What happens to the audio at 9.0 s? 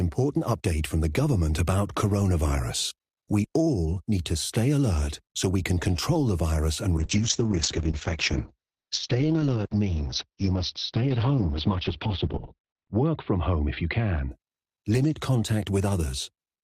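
At 9.0 s the clip is inside a call bitrate drop, running from 6.99 s to 14.37 s, just after "control the virus and". The bandwidth estimate fell, so the encoder coded far more coarsely. Audio bandwidth shrinks from 20 kHz to 4 kHz. The speech sounds muffled and rough, consistent with a fall from about 32 to 8 kbps.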